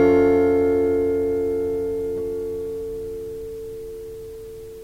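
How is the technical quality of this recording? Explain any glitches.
The recording's technical quality is sound, with no glitches, dropouts or processing faults anywhere in the signal.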